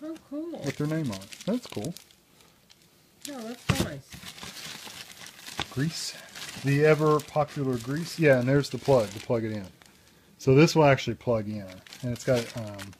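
No technical fault can be heard anywhere in this audio. There is nothing here that calls for a time or a cause.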